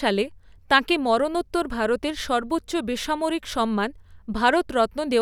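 Nothing in the speech stood out as a technical fault on listening.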